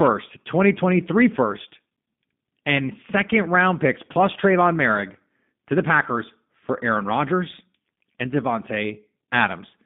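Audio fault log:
Throughout, G.729 codec: the speech is band-limited to roughly 150 Hz to 3.6 kHz and has a plainly audible rough, synthetic edge, which fits an 8 kbit/s G.729A coder rebuilding each 10 ms frame from a vocal tract filter, a pitch predictor and a few coded pulses. A spectrogram shows a hard ceiling near 3.6 kHz with nothing above, a thinned low end, and smeared, slightly buzzy harmonics. The waveform looks coarser than natural speech.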